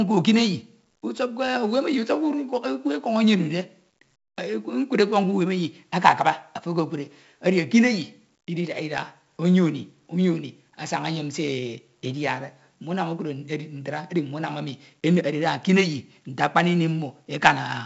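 The whole clip carries heavy 4-bit ADPCM compression. Every sample is coded as a coarse step from a prediction, so a gritty hiss rides on each loud syllable and sharp attacks crunch. Nothing sits above 7.7 kHz, which fits a 16 kHz, 64 kbps stream and dulls the speech.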